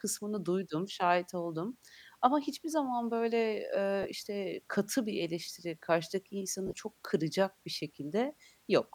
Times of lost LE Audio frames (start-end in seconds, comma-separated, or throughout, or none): 4.03-4.05, 6.67-6.77